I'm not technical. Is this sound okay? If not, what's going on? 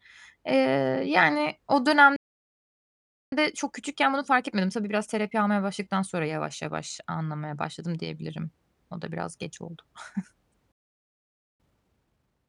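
No. The speech cuts out twice. At 2.16 s, just after "yani o", it goes silent for about 1.2 seconds, then resumes at 3.32 s. It drops out again from 10.72 to 11.60 s, a gap of just under a second. This is a playback stall. The player most likely ran out of audio to play, or was held up, and went quiet until it could carry on.

After each gap the speech sounds rushed but not squeaky. From 3.32 to 6.32 s, just before "yavaş anlamaya başladım diyebilirim", it runs about 1.1 times normal speed. After the second gap, from 11.60 s to the end, it runs 1.5 times normal speed. This is time-compressed catch-up. To make up the lost time, the player snips out tiny pieces and blends the joins. The pitch stays the same, but the speech is hurried.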